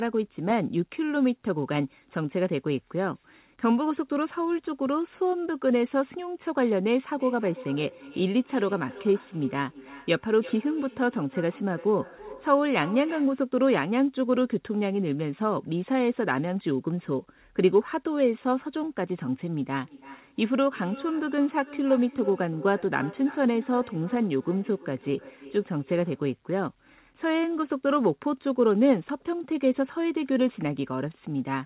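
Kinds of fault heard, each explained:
Feedback echo between two devices: From 7.13 to 13.45 s and again from 19.84 to 26.38 s, the speech comes back at a steady interval of roughly 300 ms, peaking about 17 dB below the direct voice. A second device in the room replays the call and the first device's microphone picks it up again, beyond that device's echo canceller's reach. Unlike room reverberation, which smears smoothly, these are distinct repeats at a fixed spacing.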